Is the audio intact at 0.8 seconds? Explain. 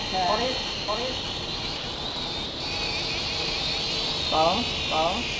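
No. From 0.74 to 0.88 s, the sender's voice detector likely treated the sound as background and stopped transmitting, so the receiver filled the gap with comfort noise. This is sound dropped by the voice detector. For those 140 ms the real audio is lost and a flat, steady hiss stands in for it, until the detector triggers again and the sound returns.

A doubled audio track also runs through this moment. A second copy of the same audio, likely captured again along a slower path, sits about half a second behind the original and about 5 dB quieter. That copy is full-band up to the 8 kHz limit of the G.722 call path, with no decay or room colour.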